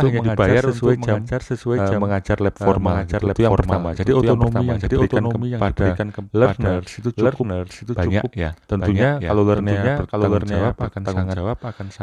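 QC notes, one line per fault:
Throughout: doubled audio track, the speech heard again as a second full-band copy about 0.7 s behind and roughly 5 dB quieter, likely from a second capture path. Unlike a room echo, the copy has no decay or reverberant colouring and does not repeat.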